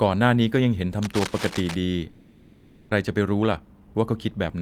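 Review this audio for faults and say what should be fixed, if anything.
Cable scratch noise runs from 1.02 to 1.75 s: dense, irregular scratching sits over the speech at about 10 dB below it. This likely comes from a worn cable or connector being moved, which makes the contact resistance fluctuate rapidly. Prevent it by replacing or securing the cable and connectors.

A long network dropout spans 2.09 to 2.93 s. No real audio arrives, so the receiver fills about 820 ms with a decaying continuation of the last sound, with no fall to silence. When speech resumes, about 600 ms is missing, and the delay has grown by roughly 200 ms, likely from a stall in the network path. Prevent it with a more reliable connection or redundancy such as forward error correction.

Jitter buffer speed-up runs from 3.03 to 4.48 s. The speech plays at 113% speed with unchanged pitch and sounds hurried. The receiver trims short pitch-period pieces repeatedly to shed roughly 200 ms of excess buffered delay after the backlog. 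Prevent it by stabilising packet delivery or spreading the delay correction more gradually.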